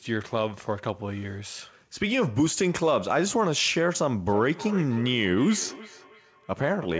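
From 4.29 s to the end there's feedback echo between two devices. A second device in the room replays the call, and the first device's mic picks it up again, so the speech returns roughly every third of a second, thinner and ringier, peaking about 13 dB below the speech.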